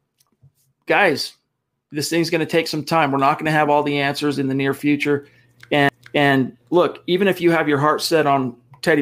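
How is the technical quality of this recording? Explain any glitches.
One glitch: a CD skip at 5.89 s, just after "in the near future" and before "look even if you". A knock or disc flaw sent the laser to another turn of the spiral. The player mutes for only a few milliseconds, heard as a tick, then resumes elsewhere. Unlike a simple dropout, the sound doesn't just pause; it jumps to a different point.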